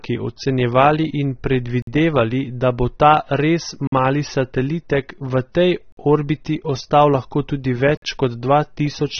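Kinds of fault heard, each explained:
AAC compression: The speech sounds dull and smeared, with nothing above 6.3 kHz and a warbly, fizzy edge on sibilants. That is plainly audible lossy-codec damage, likely AAC-LC at a low bitrate, around 24 kbps, throwing away the top end and coarsely quantising what remains.
Gap between chunks: There are 50 ms silences at 1.82, 3.87, 5.92 and 7.97 s, one every 2 s. That steady spacing points to audio handled in 2-second chunks, with each join padded or started late, so nothing's missing but the flow gets cut.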